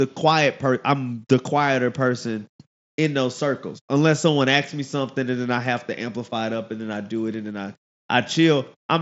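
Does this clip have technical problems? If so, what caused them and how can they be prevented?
No, there are no technical faults in this speech clip. The speech comes through a Bluetooth mSBC headset link, heard as nothing above about 7.7 kHz and a faint graininess on louder sounds, as expected for this wideband headset codec.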